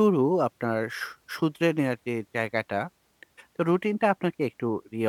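Nothing goes wrong anywhere in this bit of speech, so there's simply no fault to point to.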